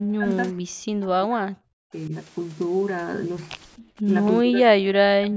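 An echo canceller likely treated double talk as its own echo and suppressed the near talker, so speech suppressed in double talk sinks by roughly 40 dB from 0 to 0.33 s, 0.51 to 2.12 s and 4.44 s onward, with a shallower dip at 3.77 to 3.85 s.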